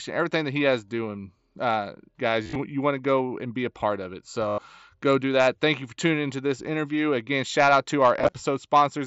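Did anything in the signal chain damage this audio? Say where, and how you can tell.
Yes, on the Bluetooth link: concealed Bluetooth headset packet loss at 2.43–2.59 s after "he has doing uh", 4.49–4.58 s after "a part of it", and 8.19–8.34 s after "shout out to". The receiver patched the lost packets by repeating the last stretch of waveform, which leaves brief buzzy, held-tone patches with a slight warble on recovery.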